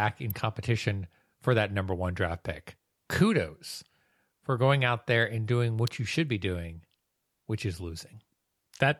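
Two sharp snaps cut across the speech, one at 0.30 s and a louder one at 5.87 s, each only a few milliseconds long. They sound like an electrical switching spike, likely a nearby switch or motor arcing and the audio line picking up that burst.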